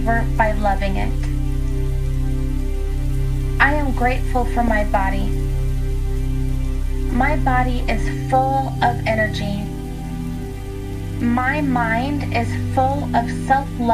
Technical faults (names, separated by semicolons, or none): DAB burbling